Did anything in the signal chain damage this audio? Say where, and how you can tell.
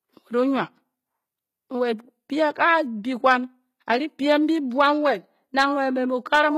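Yes. HE-AAC compression throughout, at the codec stage: nothing above 14.9 kHz, and the speech's s sounds turn gritty and lispy, likely from spectral band replication at a low bitrate near 20 kbps.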